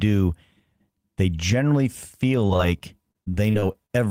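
From 2.47 s to 3.91 s the speech breaks up with repeated packet loss, giving a robotic sound. Audio data kept failing to arrive in time, and each hole was patched by stretching the preceding sound before the next dropout followed. About 16% of that stretch is concealment, about 237 ms of fill in total, with the longest gap about 37 ms. The result is choppy speech with small pieces missing.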